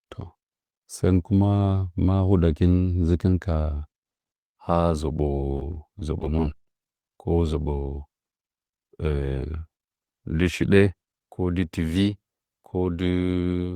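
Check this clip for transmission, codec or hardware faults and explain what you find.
One transmission fault: repeated packet loss (robotic sound) between 5.52 and 6.60 s. Over a dozen short holes, none longer than 20 ms, fall close together. Each is patched by stretching the preceding sound, covering about 14% of that stretch, while roughly 100 ms is lost outright. The speech turns choppy, with pieces missing. Unlike a single dropout, the damage is a rapid chain of tiny breaks.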